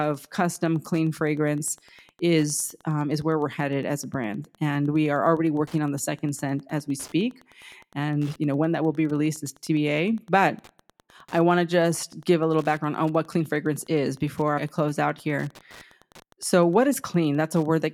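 A speech recording carrying Wi-Fi interference for its entire length: a steady ticking repeats every 102.4 ms, just under ten times a second, sitting roughly 30 dB below the speech. That interval matches a Wi-Fi beacon, so a nearby radio transmitter is coupling into the audio circuitry, where its RF bursts are rectified into audible clicks. Better shielding, filtering at the input, or moving the transmitter away would remove it.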